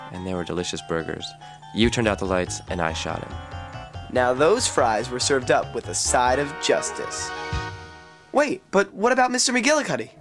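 No faults turn up anywhere in the audio.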